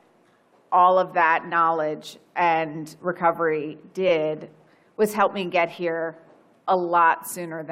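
Repeated frames at 4.08 to 4.10 s: a 23.2 ms compressed block plays twice, causing a brief stutter and lengthening the audio by 23.2 ms.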